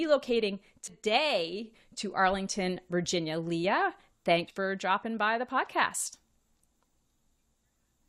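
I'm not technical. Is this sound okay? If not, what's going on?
No, there are three small jumps at about 0.87 s, 4.47 s (just before "for dropping by the") and 6.13 s. That's compressed frames skipped: chunks of roughly a tenth of a second went missing, so the speech leaps ahead.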